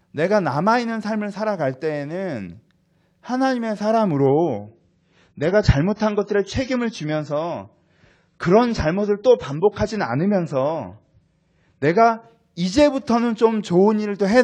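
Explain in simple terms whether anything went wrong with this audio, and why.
From 4.26 s to 12.26 s the speech turns duller, with nothing above 9.6 kHz, then recovers suddenly without any gap. This is an adaptive stream at a lower bitrate: the connection slowed, so the player switched to a smaller, lower-quality version for a while.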